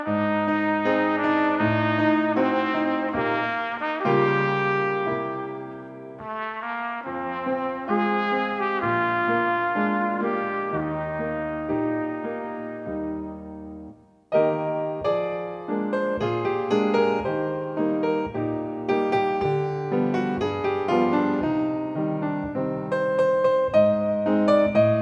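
No technical faults can be heard anywhere in this recording.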